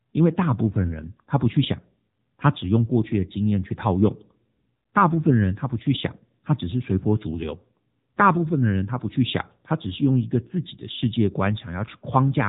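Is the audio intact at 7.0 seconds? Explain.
No. At 7.0 seconds, as through the whole clip, the speech carries AMR narrowband mobile codec damage: nothing above 3.8 kHz survives, and the pulse-driven vocal-tract model leaves a buzzy, synthetic edge, which fits a low bitrate near 8 kbps. A plain low-pass filter would only muffle the speech, without that coded texture.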